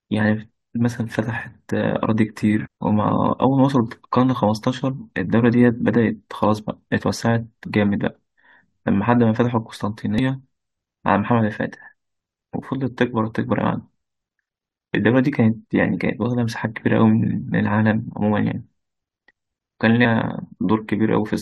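A brief blip cuts through the speech from 2.65 to 2.67 s, and a second, even shorter one appears at 10.18 s. Both come from damaged data in a compressed stream. At each point some of the encoded audio was corrupted, so the decoder misread those frames and lost sync. The garbled output was heard as a brief glitch until the decoder found the next valid frame header.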